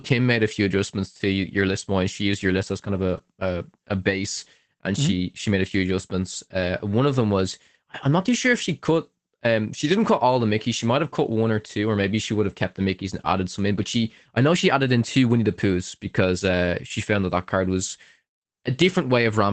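At 3.17 s, after "list as kind of", and 8.57 to 8.59 s, after "not too sure if", a lost packet rebuilt from error correction leaves a rough, noisy 20 ms patch but no gap.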